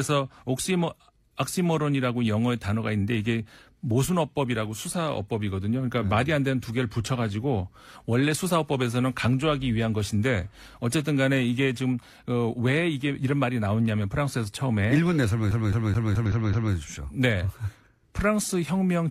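At 11.99 to 12.04 s a brief glitch cuts through the speech. This is damaged data in a compressed stream: corrupted bytes made the decoder misread those frames, lose sync and skip forward to the next frame header.

From 15.51 to 16.75 s the speech stutters rapidly and evenly, one 0.21 s fragment repeating six times with a short mute at each restart. That is a CD stuck on one turn, where a scratch throws the laser back one track every revolution. Inside that stutter, at 16.26 s, a second blip of damaged compressed data briefly breaks in as the decoder again loses and regains frame sync.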